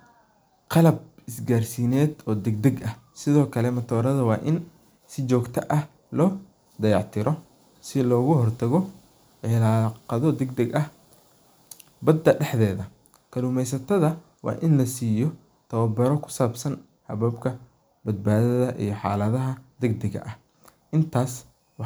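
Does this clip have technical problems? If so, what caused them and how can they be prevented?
No, there's nothing wrong to point to here, so there's nothing to trace back or guard against next time.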